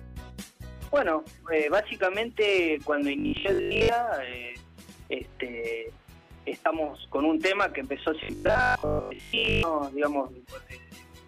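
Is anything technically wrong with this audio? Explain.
Yes. Robotic sound from repeated short buffers appears at 3.19 to 3.89 s and 8.23 to 9.63 s, likely from a player repeating a 20 ms chunk for most of the time, imposing a rigid 50 Hz metallic buzz.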